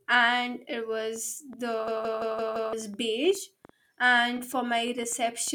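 A train of clicks begins at 1.16 s and runs to 5.49 s: about 30 similar pops at roughly six per second, unevenly spaced and peaking near the level of the speech. They are likely interference or a struggling interface injecting repeated pulses.

A system hang loop follows from 1.88 to 2.73 s. A 170.67 ms slice repeats five times at 5.86 Hz, which fits an 8192-sample ring buffer cycling while the system froze. It sounds like a machine-gun stutter, and roughly a second of speech is lost.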